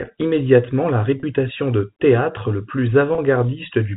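Telephone-band French speech has two brief dropouts from packet loss with pitch repetition, each about 30 ms long. The first is at 1.20 s, between "immédiatement la" and "de théâtre le plus", and the second is at 3.15 s, just after "de théâtre le plus". In each case a single lost packet was bridged by repeating the last pitch period, which leaves a slightly held, buzzy tone. On a spectrogram the harmonics freeze into flat lines for that span, and the waveform shows identical repeated cycles. The G.711 cut-off at 4 kHz is visible throughout.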